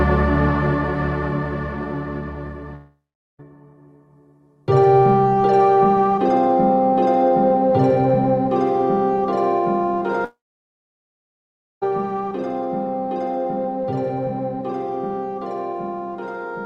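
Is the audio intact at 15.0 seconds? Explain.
Yes, the audio is intact at 15.0 seconds, with no dropout, glitch or other fault at that moment, and the call path it passed through shows only its normal band limit, with content extending to roughly 12 kHz, which fits an Opus call codec working as expected.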